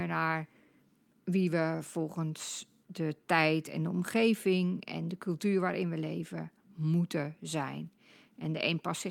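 Nothing in the speech stood out as a technical problem on listening.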